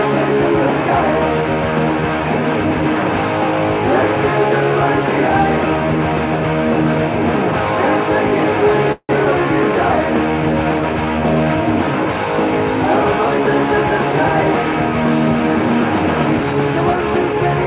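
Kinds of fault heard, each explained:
Call audio freeze: from 8.92 to 9.12 s the sound stalls, likely because packets were held back and the jitter buffer ran dry. The last sound is stretched into a fading buzz or hiss for about 170 ms, ending in roughly 50 ms of silence. Nothing is lost, just delayed. On a spectrogram it shows as smeared, repeating bands that fade to a blank strip before normal detail returns.
Short concealed packet loss: at about 9.25 s, roughly 40 ms of audio is missing and is bridged by a very brief continuation, so the sound jumps slightly ahead with a brief smear or wobble. This takes back some of the delay the freeze added. In the waveform it shows as a short discontinuity, and the spectrogram has a thin vertical seam there. Throughout, nothing appears above 4 kHz, consistent with G.711 mu-law.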